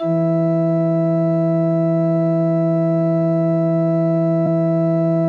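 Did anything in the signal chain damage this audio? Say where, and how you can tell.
Yes. At 4.45 s the music briefly stumbles forward: a short jump where roughly a twentieth of a second of material goes missing. That points to the codec stage, where compressed frames were skipped, a couple of whole frames either absent from the file or rejected by the decoder as damaged. Playback jumped ahead by that many frame lengths.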